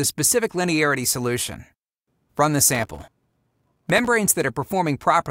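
From 2.75 to 4.06 s, the processor falls behind and misses dozens of very short audio buffers, each around 1.5 ms, in quick succession. Every miss drops a sliver of silence with hard edges, so the sound is torn by gritty processor overload crackle until the load clears.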